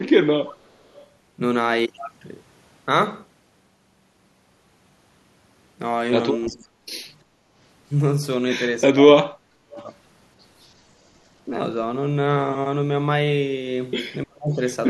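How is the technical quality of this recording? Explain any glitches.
The recording has audible call-processing faults typical of a speakerphone link: a leaking echo, the talker being cut down during overlaps, and one brief dip in the room sound.

Echo leak, at 0.46–0.57 s, 0.94–1.02 s, 6.46–6.66 s and 9.71–9.84 s. A faint, delayed copy of the voice appears in short scraps, well below the main speech, around 25 to 30 dB down. The repeat trails the original by 344 ms each time. This is likely a far-end loudspeaker whose sound reached its microphone and was only partly cancelled before being sent back.

Speech suppressed in double talk, at 6.49–6.79 s, 8.9–9.65 s and 14.23–14.6 s. The talker's level collapses steeply, by roughly 30 to 35 dB at worst, so the voice thins and breaks into pieces for a few hundred milliseconds, longest around 9 s. Both ends were likely speaking at once, and the echo canceller, unable to separate its own talker from the returning echo, pulled everything down together.

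Background gated by the echo canceller, at 7.24–7.41 s. The room tone dips by about 7 dB for roughly 150 ms, then recovers. While the loudspeaker side was active, the canceller clamped the microphone hard. When it released, the ambient sound came back, leaving a short hole in the background.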